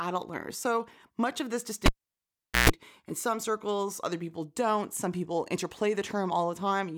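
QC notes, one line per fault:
1.86–2.70 s, cable pulled and plugged in: after "much of this" a pop cuts to near silence for 0.79 s, then 134 ms of 60 Hz mains buzz while only the plug tip touches, and a second pop as contact returns before "in some circles other".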